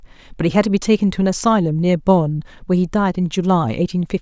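A short speech recording with no audible technical faults at any point in the signal.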